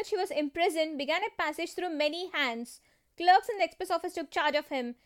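Nothing goes wrong anywhere in this speech recording; there's just nothing here to flag.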